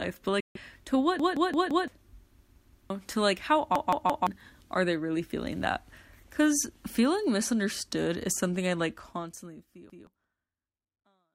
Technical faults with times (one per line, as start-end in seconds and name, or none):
0.40-0.57 Bluetooth dropout
1.19-1.88 repeated buffer
2.39-2.90 repeated buffer
3.75-4.27 repeated buffer
9.90-10.07 repeated buffer